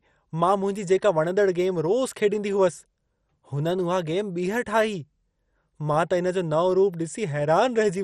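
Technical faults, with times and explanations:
Throughout, MP2 compression: the speech is dull, with nothing above 13.8 kHz, and carries a heavy gurgling, granular roughness. The likely cause is MPEG Layer II coding at a starved rate. This codec divides the spectrum into 32 equal sub-bands and shares out a fixed bit budget among them. When bits run short, the top bands are dropped entirely and the remaining ones are quantised coarsely. The degree of damage fits a bitrate of around 56 kbps.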